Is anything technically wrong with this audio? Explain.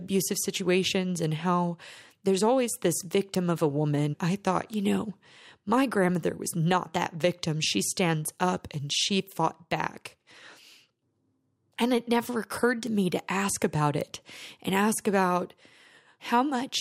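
Yes, there are five bit error spikes, each a single flipped bit in one sample, heard as a sharp, broadband tick at 3.35, 4.74, 6.15, 12.87 and 14.01 s, reaching about -9, -15, -21, -21 and -15 dBFS.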